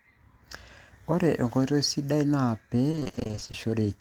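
Between 2.91 and 3.55 s, repeated packet loss fills rapid holes of up to 20 ms with prior sound: choppy and robotic, not silent.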